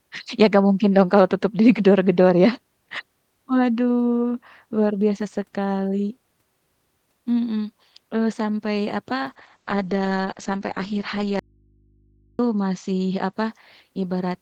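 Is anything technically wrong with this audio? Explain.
Yes, there are two problems, both late in the clip.

From 9.3 s to about 13.39 s there's a call bitrate drop. The encoder got squeezed from 32 kbps down to 10 kbps, so the top end is cut from 20 kHz to 8 kHz and the speech turns muffled and rough, bottoming out for about 3.1 s.

Inside that stretch, from 11.39 s to 12.39 s, there's an audio dropout to a faint residue. The speech cuts out abruptly for about a second, leaving only mains hum roughly 40 dB down, likely because the signal was lost while the path after it stayed live.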